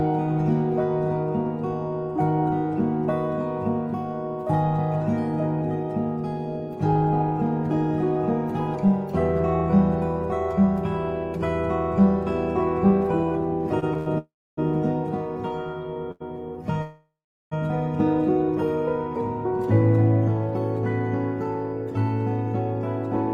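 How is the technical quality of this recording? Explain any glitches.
The recording has a cluster of network-related interruptions between about 13.8 and 17.5 s, where the audio repeatedly stops and restarts.

From 13.79 to 14.08 s there are repeated stalls (stutter): three brief hitches, the longest 90 ms, make the sound drag and catch, with nearly half that stretch filled in. Packets kept arriving late, so the jitter buffer emptied again and again, and the receiver bridged each gap by extending the last sound.

Two call audio freezes follow, at 14.18 to 14.59 s and 16.82 to 17.53 s. Each time, the sound hangs as a fading buzz or hiss, then drops to silence for 0.28 s and 0.4 s respectively. The audio then resumes where it stopped, about 0.39 s and 0.7 s late. The likely cause is packets held up in transit, leaving the jitter buffer empty until they arrived.

At 16.11 to 16.22 s a short stall from a late packet holds a sound 90 ms too long, with a slight buzz or dip. 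A single packet missed its slot, so the last sound was stretched until it arrived.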